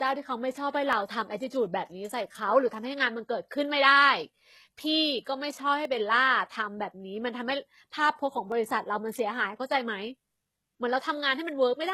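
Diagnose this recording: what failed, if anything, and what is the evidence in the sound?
Throughout the recording the speech has gritty, metallic sibilants, and its top end is bright yet synthetic. This points to the codec stage, likely HE-AAC compression at a low bitrate, one that fits something near 16 kbps. Only the lower spectrum is coded, and the treble is rebuilt by copying lower bands upward under a coarse envelope. The regenerated harmonics don't line up with the real ones, so the s sounds turn rough and lispy.

Three single sharp clicks occur, at 0.93, 5.85 and 8.52 s. Each shows as a thin vertical line across the spectrum, and none takes away any audible sound. The stage is likely the driver or buffer path dropping samples. A fraction of a millisecond goes missing each time, so the waveform jumps straight from one value to a later one. That step discontinuity is what produces each click.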